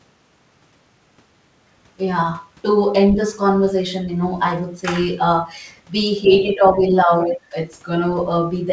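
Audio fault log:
6.24–6.52 s, other side's voice leaking through: there's a faint second voice sitting under the speech here, about 20 dB below the talker. It's quiet. The likely cause is the far end playing out of the talker's loudspeaker and getting back into their mic, with the echo canceller not fully removing it before it went upstream, so a short scrap of the other side rides along.
6.24–6.81 s and 7.05–7.54 s, speech suppressed in double talk: the talker's level sags in both spots, by about 10 dB in the first and a deeper drop of about 20 dB in the second, and roughly 300 ms of each stretch is affected. It sounds like the voice briefly ducking away. This is likely the echo canceller hitting both sides talking at once, failing to tell the talker apart from the speaker echo, and turning everything down together.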